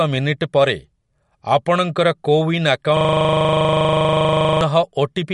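Right from the start the whole clip has that watery, swirly quality, and there's nothing at all above about 11.1 kHz, so the top end just stops. That combination points to MP3 compression, likely at a low bitrate somewhere around 49 kbps, where the encoder runs short of bits, chops the treble at a fixed point and lets weaker frequency detail flicker in and out between frames. The damage is plainly audible on the speech throughout, with s sounds getting metallic and consonant attacks smearing.

Then from 2.97 s to 4.61 s there's a system hang loop. The machine or its audio driver froze while the sound hardware kept replaying the same chunk of its buffer. Here that chunk is 40 ms long, repeating 25 times a second, which fits roughly forty passes through the same buffer. It comes across as a rapid repetition at 25 Hz until playback picks up again.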